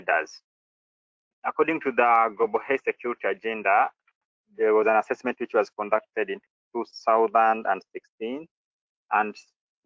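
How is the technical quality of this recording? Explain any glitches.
The technical quality of this recording is sound, with no glitches to explain.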